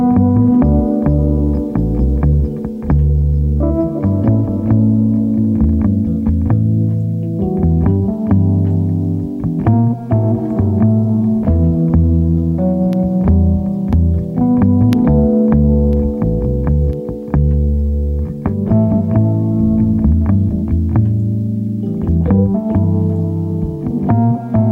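Periodic USB or driver dropouts: between 12.93 and 16.93 s something blocks the USB bus or audio driver once a second, and each time a sliver of audio, a fraction of a millisecond, is lost and filled with silence. In the sound this gives about five evenly spaced ticks at a steady one-per-second rhythm. They are audible only because signal is present, and each is a brief gap rather than an added noise.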